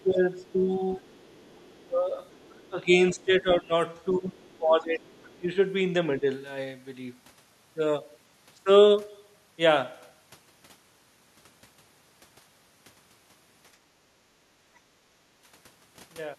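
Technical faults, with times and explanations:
0.02–6.24 s, speech suppressed in double talk: over this span the talker's level keeps sinking, in stretches adding up to roughly three seconds, at worst by something like 15 dB. The voice dips while a second voice is present underneath. This is likely the echo canceller failing to tell the local talker from the loudspeaker echo during simultaneous talking, so it turned both down together.
0.38–2.69 s, 4.53–5.36 s and 14.75–14.79 s, other side's voice leaking through: a faint second voice sits far below the talker, around 35 dB down in the first two stretches and closer to 40 dB down in the brief scrap near 14.8 s. It is likely loudspeaker playback picked up by the microphone that the echo canceller did not fully remove, leaving a residue of the far end.
14.51–14.61 s, background gated by the echo canceller: the room sound dips by about 9 dB for roughly a tenth of a second, then comes straight back. 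While the loudspeaker was active, the canceller clamped the microphone gain hard and released it once it judged the echo gone. That leaves a short hole in the ambience just before the leaked scrap at 14.75 s.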